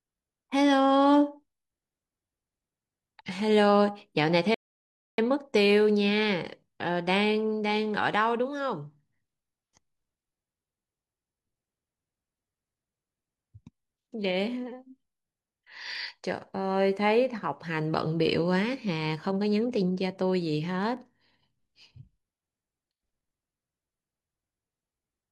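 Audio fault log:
4.54–5.18 s, rebuffering stall: the speech cuts to silence for about 0.64 s, then resumes exactly where it stopped, because playback ran dry waiting for data, adding time without losing any sound.
15.95 s, 17.38 s, 20.97 s, dropped samples: three single sharp clicks, likely from a fraction of a millisecond of samples going missing, so the waveform jumps abruptly.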